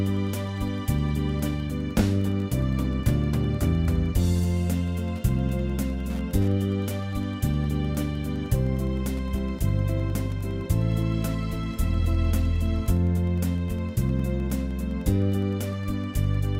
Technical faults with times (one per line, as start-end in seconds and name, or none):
0.00-16.60 Wi-Fi interference